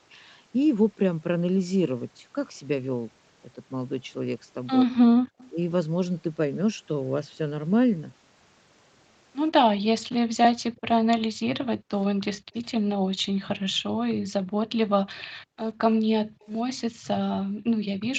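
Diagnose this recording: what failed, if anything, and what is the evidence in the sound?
Background gated by the echo canceller, at 5.2 to 5.38 s, intermittently across 10.72 to 14.58 s, and from 15.24 s to the end. This happens at the call processing stage: the room tone drops by about 29 dB, then about 40 dB, as the canceller clamps the microphone.

Echo leak, at 5.38 to 5.5 s, 15.18 to 15.23 s and 16.41 to 16.48 s. Brief, faint copies of the speech return 126 ms late, roughly 25 to 35 dB below it. The likely cause is loudspeaker pickup that the loudspeaker side's echo canceller failed to subtract.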